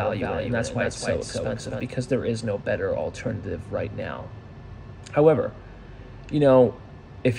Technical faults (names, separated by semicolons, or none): doubled audio track